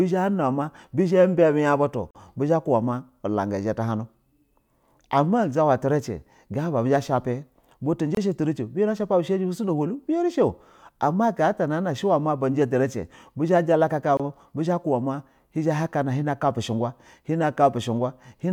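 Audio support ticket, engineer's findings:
Gap at a join of encoded pieces: speech drops out at 2.11–2.15 s (about 42 ms), 8.15–8.17 s and 14.17–14.20 s (24 ms each), then resumes mid-flow. Recurs every 6 s. Separately encoded segments concatenated untrimmed, leaving encoder delay and padding silence. Waveform shows flat dropouts with smeared edges; spectrogram shows full-band vertical blank stripes.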